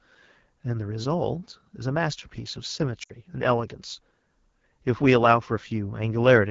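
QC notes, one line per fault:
Throughout: AMR wideband (HD Voice) codec. The speech has a plainly rough, raspy grain, the kind this codec gives when squeezed down near its lowest rates; it fits the 8.85 kbit/s mode. At that rate the model of pitch pulses and vocal tract shape can't carry enough detail, so voicing turns gritty. The top band from 6.4 to 7 kHz is filled with shaped noise rather than real signal.
3.03 to 3.12 s: lost AMR speech frames. The sound drops out for about 60 ms, which fits three consecutive 20 ms frames failing their checksum. With nothing valid to decode, the decoder keeps replaying the last good pitch and vocal tract settings while ramping the gain down, so the sound smears and fades rather than cutting off cleanly. In wideband that fade happens quickly, dropping to near silence within two frames.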